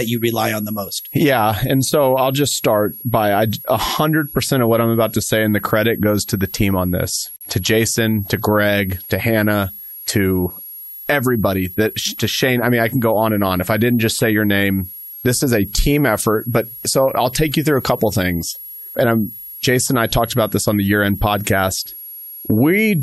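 A switching supply whistle runs under the speech for the whole clip. A power converter is running in an audible burst mode or beating with another one, and the result is a thin high tone that wanders between about 11.3 and 11.5 kHz. It sits roughly 15 dB below the speech. The slight pitch drift follows the supply's changing load.

At 7.36 s a gap at a join of encoded pieces cuts the speech for about 49 ms, until 7.41 s. The audio was encoded in separate segments and spliced without trimming, so the encoder's start-up delay and the padding on the final frame both remain at the seam. The codec smears the edges of the silence, so the fully silent part is shorter, and the speech resumes exactly where it broke off.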